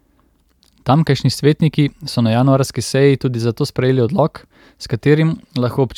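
No technical faults are audible.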